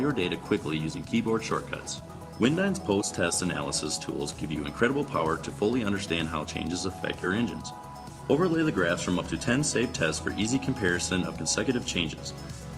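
No technical faults can be heard anywhere in this clip. There is nothing to point to at any moment in the recording.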